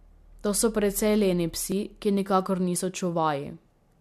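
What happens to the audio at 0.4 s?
At 0.44 s the speech jumps ahead: a dropped buffer, likely an overrun where the hardware overwrote samples before they were read, losing about 20 ms. Unlike a dropout, there is no silent gap, because the two sides are spliced directly together.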